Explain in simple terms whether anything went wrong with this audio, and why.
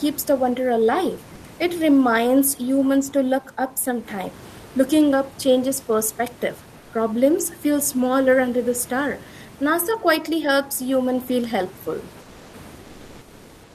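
Three short pauses have comfort noise in place of the background: at 1.35 to 1.43 s after "the wonder alive", 6.79 to 6.91 s after "up changes perspective", and 12.21 to 12.53 s after "helps human feel helpful". The real room noise gives way to a flat, featureless fill, likely because the sender stopped transmitting during silence.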